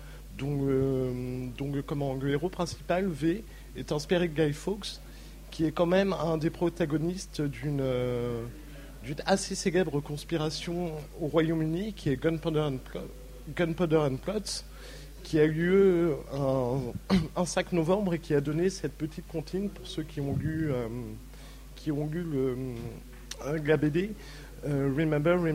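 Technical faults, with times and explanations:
Throughout: mains hum, a steady 50 Hz tone from power-line coupling via a ground loop or transformer, roughly 20 dB below the audio. Fixed pitch and level distinguish it from rumble.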